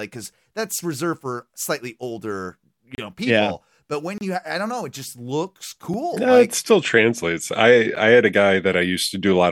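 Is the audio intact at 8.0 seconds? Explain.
No, there is a block of digital silence at 7.96 s, between "it still translates I" and "I had a". About 10 ms of samples drop to zero with no fade, so the sudden cut and return are heard as a brief tick.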